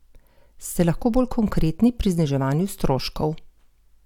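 No technical faults are audible.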